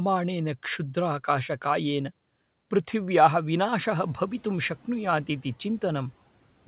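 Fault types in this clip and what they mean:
Noise suppressor catching up: The room noise jumps by about 10 dB near 4 s. The suppressor's noise estimate lags. From 3.85 to 4.73 s the noise passes through louder, then sinks by about 5 dB as the estimate adapts.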